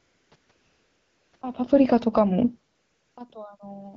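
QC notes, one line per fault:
0.00–0.31, 0.35–0.49, 0.51–1.33, 1.35–1.41, 2.73–3.17, 3.57–3.59 s, AMR comfort noise: the phone treated these stretches as silence and sent no speech frames, so the receiver substituted smooth synthetic noise for the real room background. The noise switches in and out at each boundary and can clip quiet endings.
1.58–3.39 s, automatic gain falling: the gain control judged the input too loud, or its background too strong, and pulled its gain down gradually by about 9 dB. Speech and room noise sink together over nearly two seconds, beginning shortly after the talker moves at around 1.5 s.
2.07–2.58 s and 3.32–3.95 s, automatic gain rising: the input level dropped by about 24 dB, so the gain control pushed back up by about 4 dB and then about 3 dB. Voice and background swell together, partly countering the falling gain. The AMR-WB coding at 12.65 kbit/s is also audible as light codec damage.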